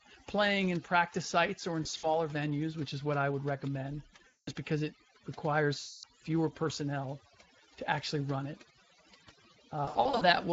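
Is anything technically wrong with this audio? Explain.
Yes. Overdone noise removal runs throughout. Bands near the noise floor are cut hard, leaving near-silent gaps with twinkling specks.

The Speex codec damage is plainly audible throughout. The hoarse, noisy texture fits Speex at about 20 kbps.

VoIP packet loss concealed by the speech codec occurs four times: 1.83–2.20 s, between "practice sites or in" and "venues which is what"; 4.27–4.50 s, after "what I would recommend"; 5.79–6.05 s, before "fewer personnel to actually"; and 9.85–10.24 s. The decoder extends its last pitch and filter, so each gap becomes a fading buzzy tone or coloured noise. The first and last gaps are scattered dropouts of up to 60 ms. The middle two are continuous, each about 200 to 240 ms long.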